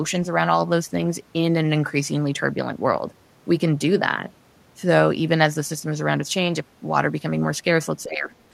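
From 8.04 to 8.32 s the speech sinks by around 15 dB. This is speech suppressed in double talk, likely from an echo canceller unable to separate this talker from the overlapping far-end echo and turning both down. Unlike a packet dropout, the sound ducks rather than vanishing abruptly.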